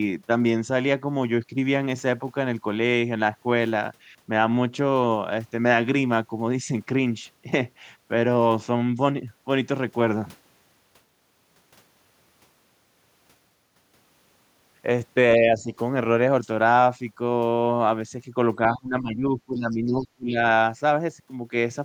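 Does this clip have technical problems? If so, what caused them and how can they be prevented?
Yes. Speech suppressed in double talk occurs briefly at 15.4 to 15.67 s as a slight dip, then deeply from 18.76 to 20.38 s, falling as much as about 20 dB, with about 1.5 s of that stretch affected. It is likely caused by an echo canceller that muted the talker along with the far-end echo. On a waveform, the envelope sags. A spectrogram shows thinned or vanishing energy, especially the upper bands. A double-talk-aware echo canceller, or a headset, prevents this.

The other side's voice leaks through from 19.71 to 19.75 s as a very faint scrap, far below the speech. This is likely loudspeaker echo that the canceller left behind. It appears as a tiny, thin burst of energy on the spectrogram and is barely visible on the waveform. Using headphones or better acoustic echo cancellation stops this leakage.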